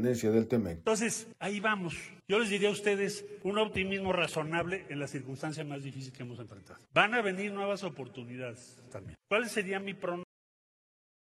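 At 10.23 s a cut-off end: the final buffers never played, so sound stops mid-event into digital silence, a flat waveform and blank spectrogram with no decay.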